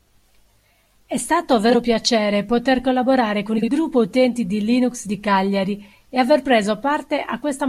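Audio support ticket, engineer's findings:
Frames out of order: brief garbled flutter at 1.70–1.76 s, just before "piacere poter collaborare con", and at 3.58–3.68 s, right after it. Adjacent blocks swapped in playback, about 23 ms and 46 ms each, no time lost. Spectrogram shows vertical seams at the three joins in each stretch.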